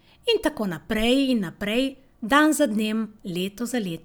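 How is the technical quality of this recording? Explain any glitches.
The technical quality of the recording is sound, with no glitches to explain.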